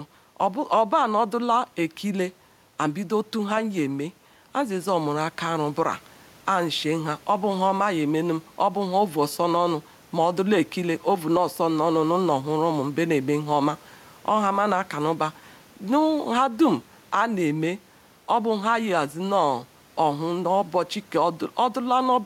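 Gain pumping runs the whole way through: the gain swings by around 10 dB, likely from input gain set too high.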